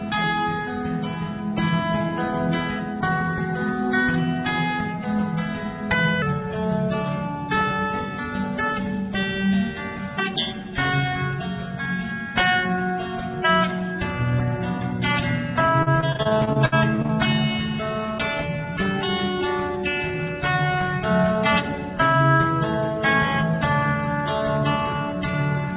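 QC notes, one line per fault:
6.22 s to the end: section at the wrong speed. Playback runs at 0.872x, so everything is slower and about two semitones lower, likely from resampling against the wrong clock. A spectrogram shows harmonics shifted downward, and waveform events are stretched in time.
15.83–17.11 s: repeated packet loss (robotic sound). Dropouts recur, the longest about 65 ms, and about a quarter of this stretch is patched by extending the previous sound. That gives a choppy texture with pieces missing. A spectrogram shows repeated vertical seams with frozen, smeared harmonics.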